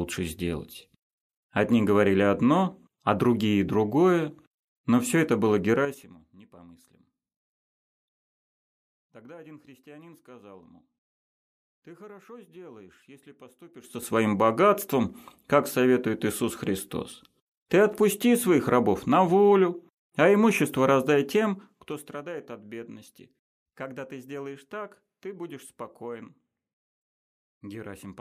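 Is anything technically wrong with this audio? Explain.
Yes, there is zipper noise at 5.76 to 6.13 s, 13.75 to 14.12 s and 21.27 to 22.20 s. The level moves in unsmoothed 6 dB steps at about ten a second. That is 2 dB steps in the last fall. A drop of roughly 25 dB, a rise of about 25 dB and a fall of about 15 dB each become an audible ticking, zipping rattle.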